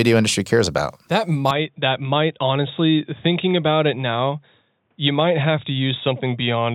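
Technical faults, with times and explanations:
1.51 to 6.74 s, input switched to a poorer device: capture likely moved to a narrower-band microphone or headset profile, so the speech loses everything above 3.8 kHz, turns dull and boxy, drops roughly 5 dB and gains faint new background noise, with no gap.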